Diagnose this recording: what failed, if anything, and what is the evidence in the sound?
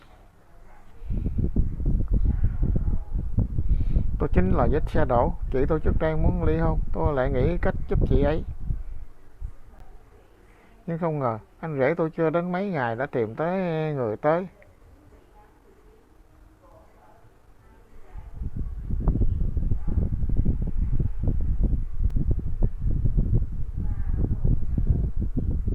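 The fault is in the driver or buffer stage: two blocks of digital silence. The sound drops out at 9.79 s for 15 ms and at 22.10 s for 3.7 ms. Both edges are abrupt. This points to the output buffer not being filled in time.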